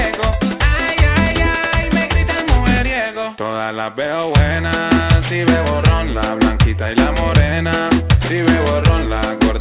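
Gritty, metallic false tones run throughout, folded back below 4 kHz. This is aliasing: the rate was lowered without anti-alias filtering, consistent with resampling to 8 kHz.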